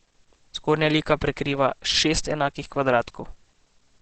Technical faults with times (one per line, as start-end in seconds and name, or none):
0.00-4.01 Opus compression